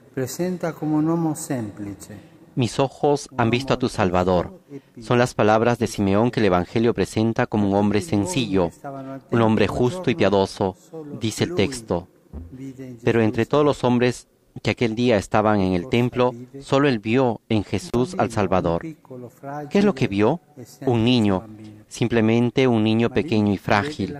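At 17.87 to 17.95 s an intermittent contact opens the signal path for about 51 ms, cutting the sound abruptly, with crackle at each edge and faint hiss in the gap.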